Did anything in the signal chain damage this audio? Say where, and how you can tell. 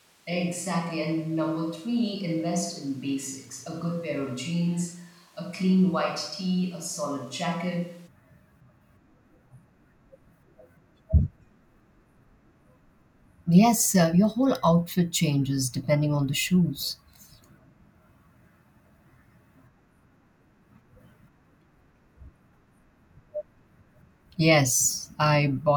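Yes. Until 8.06 s the speech sounds roomy, hollow, bass-thin and about 5 dB quieter, then abruptly closer. This is likely a switch to a distant microphone at capture.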